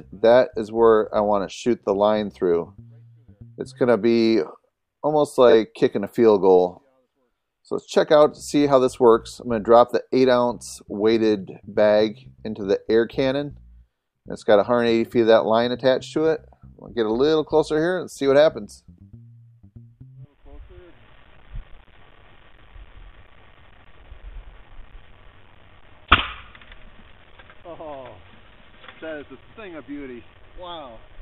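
At 5.49 to 5.54 s, frames out of order: two adjacent blocks of audio were decoded in swapped sequence, so this 50 ms stretch plays its second half before its first. The halves are about 23 ms each, which fits single codec frames exchanged. It is heard as a brief garbled flutter with no time lost. A spectrogram shows the harmonic and energy contours stepping backward and then forward again, with vertical discontinuities at the three joins. The waveform shows abrupt envelope jumps at those joins.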